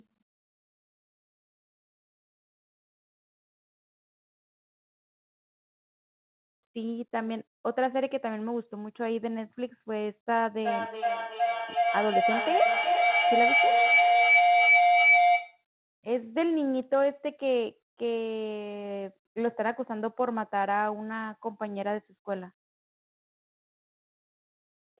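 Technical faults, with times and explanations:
10.63 to 15.64 s, feedback howl: a tone near 700 Hz swells to about 6 dB above the speech. The loop delay is about 0.4 s, and the howl grows because the microphone-to-loudspeaker loop gains level on each trip.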